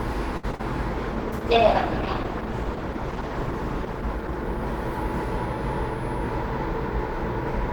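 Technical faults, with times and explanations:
0.37 to 0.45 s, short stall from a late packet: a packet arrived late and the jitter buffer ran dry, so the receiver held the last sound for 58 ms before resuming at the same point. Nothing is lost, but the sound drags with a faint buzz.
0.51 to 0.55 s and 0.55 to 0.61 s, short concealed packet loss: two back-to-back gaps of about 20 ms and 40 ms never reached the decoder. The receiver extrapolated the preceding sound across both gaps and blended back, giving a brief smear or wobble.
0.90 to 5.73 s, call bitrate drop: the bandwidth estimate fell and the encoder went from 48 kbps to 12 kbps, staying at the lowest rate for about 3 s. Coarser coding and a lowered high-frequency cutoff make the sound rough and muffled until the rate recovers.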